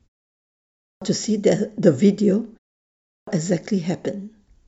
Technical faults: clipped start after a pause

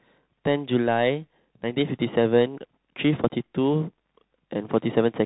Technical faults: Bluetooth CVSD headset codec

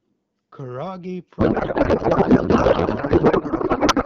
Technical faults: codec payload misread

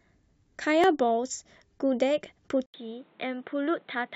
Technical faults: overlap between stream segments; input switched to a poorer device

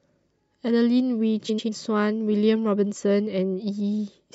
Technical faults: frames out of order

